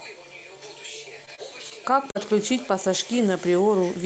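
Speech carried over a call codec whose top end stops near 8 kHz shows short concealed packet loss at 1.25–1.29, 1.35–1.40, 1.70–1.73 and 2.11–2.17 s. Roughly 20 to 40 ms of audio never arrived, so the receiver extended the preceding sound and blended back. Unlike a dropout, these spots are smeared or wobbly rather than silent.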